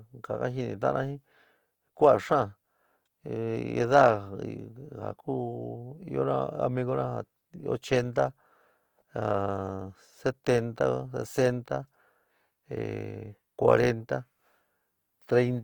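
From start to finish the speech has a grainy, rough texture, with noisy fill where clean detail should be, but the top still reaches about 20.2 kHz. That's likely Opus compression in its music mode, at a rate that fits around 24 kbps.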